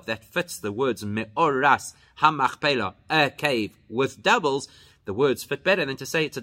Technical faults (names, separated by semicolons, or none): none